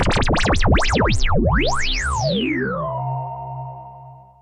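No technical faults are audible anywhere in the clip.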